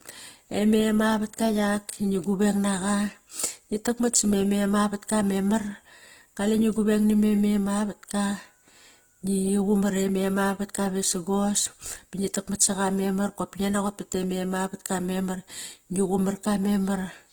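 From start to finish the speech sounds grainy and rough, with noisy texture replacing clean harmonics, though content still reaches about 20 kHz. This is likely Opus compression in its music mode at a low bitrate, around 16 kbps, filling starved bands with folded or noise energy.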